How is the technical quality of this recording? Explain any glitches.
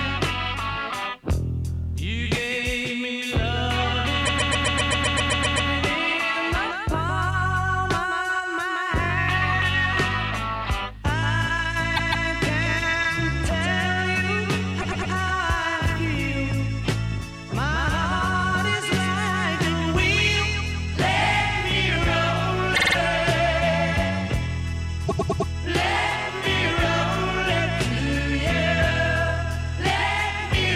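The recording has stuttering glitches from repeated frames. At 4.25, 11.95, 14.8, 22.74 and 25.07 s, a short block of compressed audio plays again and again. The blocks are about 52 to 157 ms long, and each repeat is heard as a stutter. The longest repeats at 4.25 s for 1.4 s.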